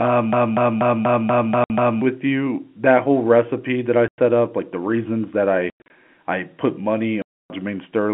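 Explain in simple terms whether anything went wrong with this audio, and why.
Two problems can be heard in this audio.

From 0.33 to 2.01 s there is a broken-record loop: a 0.24-second scrap of sound plays seven times in a row, identical each time, just before "with you". The sender likely stalled and kept resending its last piece, so the original audio for that stretch is gone. Unlike a stutter, every repeat is exactly the same.

There is also packet loss filled with silence. Hard-edged holes appear at 1.64 to 1.70 s, at 4.08 to 4.18 s between "whole recipe that I" and "up like the reasons", as several short gaps from 5.7 to 5.9 s between "like the reasons that" and "I put", and at 7.22 to 7.50 s. Nothing repeats in these holes, which separates them from the loop. Their lengths fit 20-millisecond packets. All of this is heard through the narrow sound of a telephone line.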